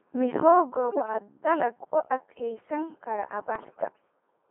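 Throughout, the speech passes through a Codec 2 vocoder, and the damage is heavy. The decoder rebuilds each frame from a pitch value, a voicing decision, an energy level and a coarse spectral envelope, driving banks of sine waves instead of reproducing the original waveform. The result is robotic and buzzy, with a flat synthetic timbre that fits the 2.4 kbit/s mode, confined to roughly 250 Hz to 3.4 kHz.

From 0.90 to 1.14 s, just before "dalag u", bit errors on digital voice radio corrupt the vocoder stream. Because every bit controls pitch, level, voicing or spectrum for a whole frame, the flipped bits make the voice lurch in pitch and loudness and break into warbling, bleeping gibberish. The span suggests around nine damaged frames at an error rate near one bit in ten. A second burst runs from 3.56 to 4.02 s, longer but milder at roughly one bit in twenty, producing the same jumpy pitch, unstable tone colour and intermittent synthetic squawks over what points to about eighteen frames.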